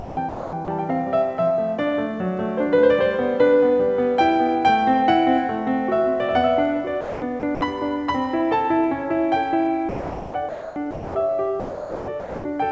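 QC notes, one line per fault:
0.00–0.68 s, 7.01–7.61 s, 9.89–11.15 s and 11.60–12.44 s: sound chopped by the voice detector. The music drops out into flat synthetic hiss for anywhere from about 0.3 s to nearly a second, likely the sender's detector deciding the quieter passages weren't worth sending and swapping in comfort noise.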